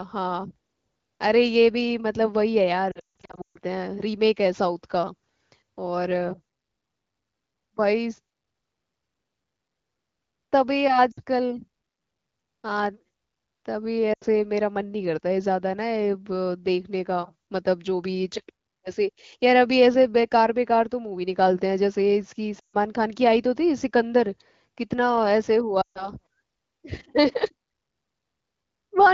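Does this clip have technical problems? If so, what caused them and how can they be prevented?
Yes. Lost AMR speech frames cause dropouts at 2.91 to 3.58 s, 11.11 to 11.20 s, 14.13 to 14.24 s, 22.59 to 22.76 s and 25.81 to 26.09 s. The first is the worst, with about 460 ms lost, scattered through the span in runs of up to 160 ms. Radio errors corrupted frames, so the wideband decoder held its last good pitch and vocal-tract settings while fading the gain. The result is a smeared, sinking sound that quickly dies away before the voice returns, briefly weak. The underlying 15.85 kbit/s AMR-WB coding stays clear between these gaps. Stronger radio coverage, more robust channel coding or a lower codec mode in poor signal conditions would reduce these losses.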